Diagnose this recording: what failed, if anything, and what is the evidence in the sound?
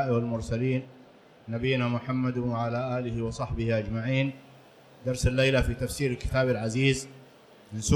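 From 4.26 s to the end, pre-emphasis is left on. Treble sits about 8 dB hot at 10 kHz. Playback skipped the 50/15 µs de-emphasis.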